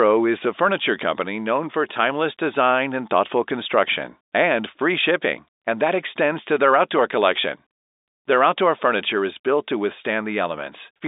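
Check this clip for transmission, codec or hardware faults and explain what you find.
Nothing stood out on listening to this telephone-band speech recording.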